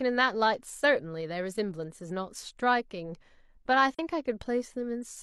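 Speech, with one AAC frame loss with muting. At 3.92 s the sound fades away and returns by 3.99 s. The gap of about 43 ms fits a single lost frame. The decoder zeroed its spectrum, and overlapping windows softened both edges of the hole.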